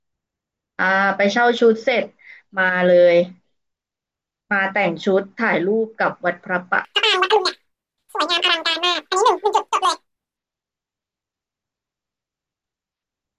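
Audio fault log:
6.85 to 10.37 s, wrong sample rate: the speech suddenly runs at double speed and jumps a full octave higher, which fits 16 kHz material being played out at 32 kHz without conversion. On a spectrogram the harmonics and formants stretch upward to twice their frequency, and in the waveform syllables are squeezed to half their length.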